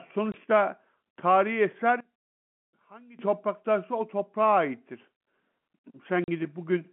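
At 0.32 to 0.34 s the speech breaks for 20 ms into dead silence. This is packet loss filled with silence. A stretch of the stream never arrived and the receiver inserted silence, and the length fits a single 20 ms packet. Unlike a fade or a level dip, the hole is total and hard-edged, and its length is a clean packet multiple rather than a random duration.

From 2.00 to 3.19 s the speech drops by about 21 dB, leaving only a faint residue. The likely cause is one channel inverted, so that the common centred signal cancels when the two channels are summed to mono. A simple gain drop would keep the tone intact. Here only a faint leftover of the mismatch remains, which is what points to cancellation rather than attenuation.

At 6.24 to 6.28 s a second silent gap appears. It lasts 40 ms, which fits two consecutive lost packets, and this is again packet loss filled with silence. Throughout, the sound carries the narrow 150 Hz to 3.4 kHz band of G.711 telephone coding, and that band is not part of the faults.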